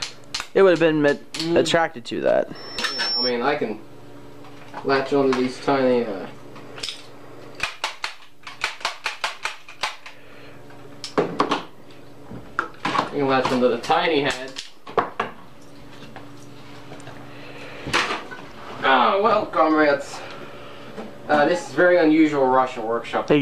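Loudspeaker feedback squeal from 2.55 to 3.33 s: the microphone re-amplifies its own loudspeaker, and a 5.4 kHz tone swells over most of a second to roughly the programme's level.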